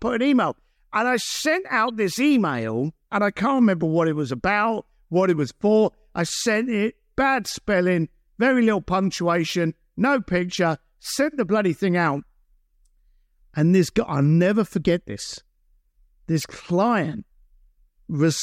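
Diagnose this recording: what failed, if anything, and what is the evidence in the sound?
Codec stage, corrupt frame decoded: short chirp-like bursts at 1.88–1.90 s, between "I sent" and "this email and I", and louder at 16.38–16.46 s. Damaged frames were decoded anyway, misplacing spectral energy rather than leaving concealment gaps.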